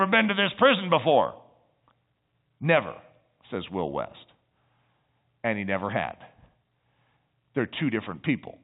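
Listening through this speech recording over G.711 telephone coding, nothing stood out as a technical problem.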